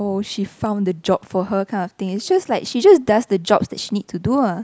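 A short speech recording with no technical faults to point to. Nothing in the audio calls for a time or a cause.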